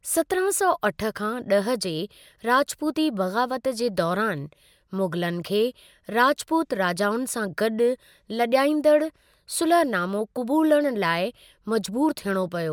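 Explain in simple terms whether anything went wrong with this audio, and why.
Nothing went wrong here; the speech is intact, with no audible fault anywhere in the recording.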